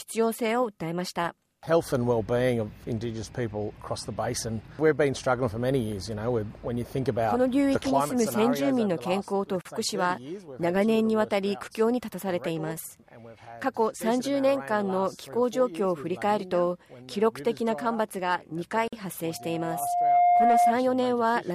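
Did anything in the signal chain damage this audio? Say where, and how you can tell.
Yes, two things. First, a gap at a join of encoded pieces, which is a codec or editing-stage problem. The sound drops out from 9.61 to 9.65 s (about 39 ms) and again from 18.88 to 18.93 s (about 48 ms), then carries on right where it stopped. The pieces were encoded separately and butted together untrimmed, so each encoder's startup delay and last-frame padding stayed in as silence. The edges are smeared by the codec.

Second, loudspeaker feedback squeal, an acoustic loop on the analogue side. From 19.29 to 20.76 s a single 706 Hz tone swells up over roughly a second until it sits around 10 dB above the rest of the sound. The mic is hearing its own loudspeaker, and at that frequency the loop gain tipped past one, so the tone keeps feeding itself and grows until something limits it or the loop is broken.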